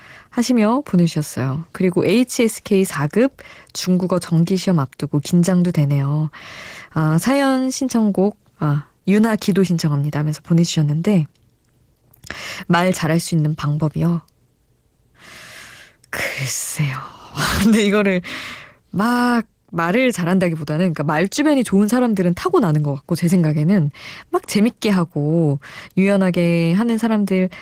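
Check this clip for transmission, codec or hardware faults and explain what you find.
One codec fault runs through the whole speech clip. Opus voice compression, throughout: the lower band is coded by linear prediction and the top by a transform layer, with the excitation quantised coarsely. That fits roughly 16 kbps in 20 ms frames and leaves the speech plainly hoarse and slightly robotic.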